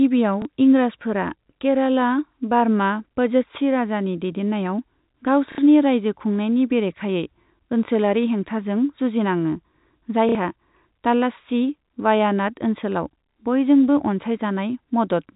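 At 0.42 s, just before "इंराजफोरा केराला बार्मा पझस्सी", there is a small blip. Stutters follow at 5.52 and 10.29 s, and another blip at 13.32 s. This is packet loss with the last packet repeated. Each gap, 30 or 60 ms, was filled by replaying the previous chunk, which fits 30 ms packets. The 60 ms repeats buzz briefly and robotically.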